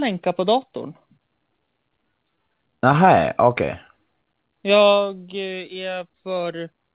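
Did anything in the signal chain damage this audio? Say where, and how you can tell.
Yes. Repeated stalls (stutter) run from 1.66 to 3.09 s in this speech, at the network and jitter-buffer stage of the call path, whose G.711 coding leaves nothing above 4 kHz. Twelve brief holds are scattered through that stretch, none longer than about 14 ms and roughly 117 ms in total. Packets arrived late or too slowly, so the buffer kept running dry, and each time the receiver stretched the last sound to bridge the wait. Nothing is lost, but the speech drags and stutters.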